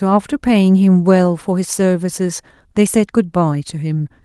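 No technical faults are audible.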